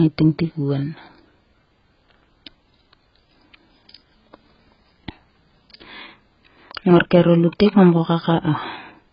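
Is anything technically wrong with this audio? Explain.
Yes. Throughout the speech, nothing survives above 5.4 kHz. The sound is dull and smeared. Sibilants turn fizzy, and sustained vowels warble. The likely cause is heavy AAC compression. The coder dropped the upper bands and quantised the rest coarsely, which fits a bitrate near 12 kbps.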